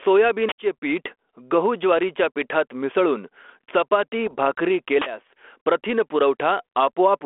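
Throughout the speech, the level shows gain pumping: loud and soft parts are pulled closer in level and the sound is squashed, with a swing of around 10 dB. The likely cause is gain set far too high, with a fast limiter clamping each peak. Unlike a noise gate, which cuts the gaps toward silence, this evens out loud and soft parts.

From 0.49 to 0.58 s an uninitialised buffer plays: a loud, harsh block of digital noise about 93 ms long, which fits a 4096-sample block filled with leftover memory rather than audio. It starts and stops abruptly and has no link to the speech level, which sets it apart from codec errors.

Between 4.26 and 4.36 s come bit errors on an ADPCM link. The rough pops ring on briefly and the level jumps for a moment, because each flipped bit also throws off the decoder's step size and prediction.

At 5.02 to 5.06 s a second uninitialised buffer bursts through, again as a flat block of loud noise, this time about 46 ms long, which fits a 2048-sample block. 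The 32 kbit/s G.726 telephone band, 300 Hz to 3.4 kHz, carries only light codec damage beneath all of this.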